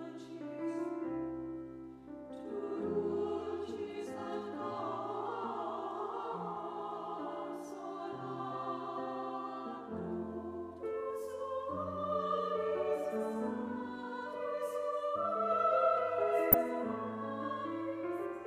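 A brief burst of noise breaks through the audio from 16.52 to 16.54 s, short blips of noise in individual sub-bands. This is DAB burbling. Weak reception let bit errors slip past the error correction into the MP2 data, so wrong samples put short blips of noise into individual sub-bands. The short burst points to a few corrupted frames, with an error rate of around a tenth of a percent.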